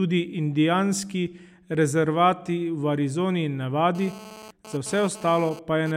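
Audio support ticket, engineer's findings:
GSM phone buzz, 3.95 to 5.92 s. Hard, raspy 217 Hz buzz, rich in harmonics, about 19 dB below the speech, intermittent. Nearby 2G handset transferring data; bursty RF pulses rectified in the analogue audio input stage.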